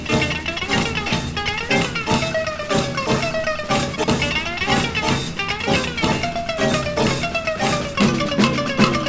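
At 1.08 to 1.14 s there is a short concealed packet loss: about 40 ms of audio never arrived, and the receiver filled 38 ms of it by extending the preceding sound before fading back into the real signal. It comes across as a brief smear or wobble with no hard edge. What separates it from a reordering fault is that material is genuinely missing and the patch is synthetic, so the moment sounds blurred rather than cut and rearranged.

Chunks out of order follow at 3.96 to 4.08 s, where a 40 ms chunk plays two chunks later than it should, and again at 6.04 to 6.12 s, where a 40 ms chunk is one chunk late. Nothing is lost. The sequence is simply scrambled, leaving three abrupt joins at each spot. These are heard as a jumbled stutter, sharper and more choppy than the soft smear of concealment. Throughout, the audio carries nothing above 8 kHz, which fits a wideband call codec.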